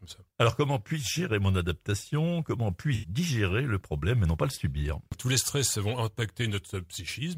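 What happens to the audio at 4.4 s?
Nothing goes wrong at 4.4 s: the audio there plays through intact, with no dropout, click, glitch or other fault at that moment.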